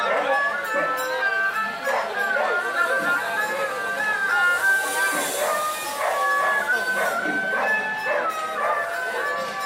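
No audible technical faults occur anywhere in this recording.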